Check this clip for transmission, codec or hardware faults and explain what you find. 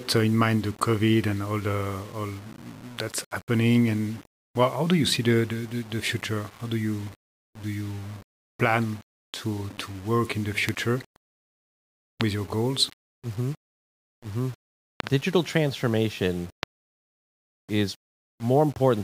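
Two problems here: a grainy, signal-following distortion across the whole speech clip, and a cluster of loud pops in the back half.

Low bit depth without dither runs from start to finish. The grit rides on the speech itself and changes with it, so quiet passages turn rough and the softest tails sputter or drop out rather than fading smoothly. That fits audio that was likely rounded to around 7 bits with no dither, leaving an error floor roughly 25 dB under the signal.

Loud pops land at 10.69, 12.21, 15.00 to 15.09 (two in quick succession there) and 16.63 s. Each is a sharp, very short click or thump, roughly 20 dB above the speech, and the speech carries on under it. That pattern likely comes from sudden voltage steps or pulses, such as a dodgy connector, a switch, static or a driver glitch, which the downstream circuitry shapes into a brief spike.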